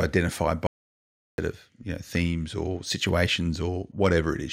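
At 0.67 s the speech cuts off abruptly and the clip falls into silence, with no room tone or background hiss, until 1.38 s, when the talker returns mid-phrase on "of you know themes". This is an audio dropout to silence lasting about 0.71 s. The cause is likely a momentary loss of the input signal while the recorder kept writing silence, so whatever was said in that gap is missing.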